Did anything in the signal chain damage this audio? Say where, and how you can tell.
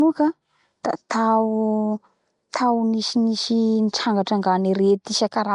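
Yes. The damage sits at the codec stage and runs through the whole clip. The speech carries a rough, hissy halo and a smeared, underwater quality, and the artefacts are plainly audible. Nothing is present above 10.6 kHz. This is likely Nellymoser compression, the old Flash microphone codec, at a rate that fits about 44 kbps. It codes short blocks with a fixed, small bit budget. Weak bands get no bits and are refilled with noise, which produces the hiss and smear.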